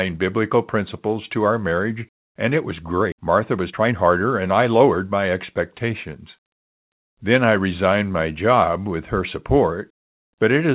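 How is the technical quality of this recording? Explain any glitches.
The recording has two glitches close together, heard through a narrowband call path whose sound stops at 4 kHz, which fits G.711 mu-law at 64 kbps.

At 3.12 s, just after "marriage and it was", the speech jumps forward abruptly with no gap, and about a second of talk is simply missing. This is a skip ahead: a jitter buffer holding later audio dropped a chunk, splicing the two sides together.

From 3.17 s to 6.10 s the speech sounds hurried, running about 113% speed at unchanged pitch. This is a jitter buffer speed-up: after the skip the buffer still held excess audio, so it repeatedly trimmed short pitch-period pieces, shedding roughly 400 ms overall.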